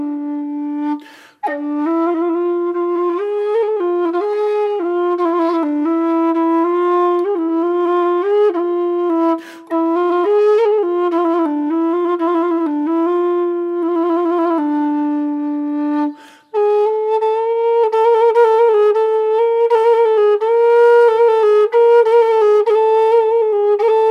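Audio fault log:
No faults heard anywhere.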